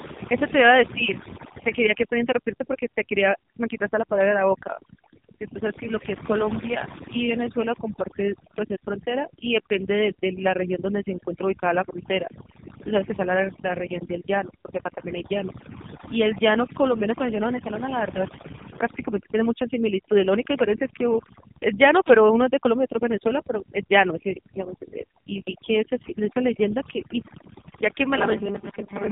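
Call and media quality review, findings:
Overdone noise removal, whole clip. Background pushed down and broken into twinkling specks. Probable component: noise suppressor set too aggressively, dropping individual bands near its noise estimate along with quiet speech detail. Unlike a gate, the artefacts are spectral and flicker within words.

AMR narrowband mobile codec, whole clip. Hard band limit at 3.8 kHz, heavy buzzy, synthetic coloration. Damage this severe points to a low AMR-NB mode, around 5.9 kbps. Unlike plain low-pass filtering, the pulse-driven vocal-tract model adds synthetic buzz, not just dullness.

Robotic sound from repeated short buffers, 28.17 s to the end at 29.12 s. Rigid metallic buzz at 200 Hz, with roughly half the audio seemingly replaced by repeats. Likely cause: late packets, with the last 5 ms of audio looped while real audio is skipped. Unlike the codec buzz, the buzz rate is fixed by the buffer length.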